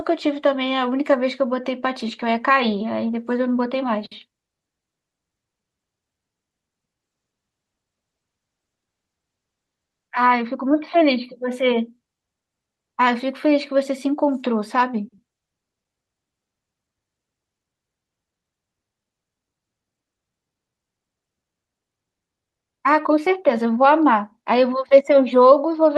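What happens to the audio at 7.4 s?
A call bitrate drop runs from 7.03 s to 10.17 s, so 7.4 s falls inside it. The call's bandwidth estimate fell and the encoder was pushed to spend far fewer bits. The speech sounds rougher and more watery, consistent with a drop from around 64 kbps to about 15 kbps. It is also duller, because its top end is now cut off near 12 kHz instead of 20 kHz. This thinner sound persists until about 10.17 s.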